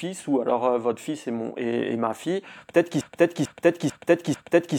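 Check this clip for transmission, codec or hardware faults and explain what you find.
One fault: a broken-record loop from 3.01 s to the end of the speech clip. A 0.44-second fragment plays four times back to back. The likely cause is a stalled player, encoder or stream resending its last buffered piece, so the intended audio is lost.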